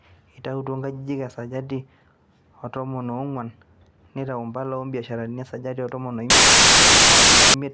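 A speech clip in which, from 6.30 s to 7.54 s, just after "esajati e tomon o", the file tags are played as audio: an embedded cover picture's compressed bytes are read as samples, giving a hard-edged burst of very loud white noise. On a waveform it is a solid slab of high amplitude; on a spectrogram, an even broadband block spanning all frequencies, with sharp vertical edges at start and end.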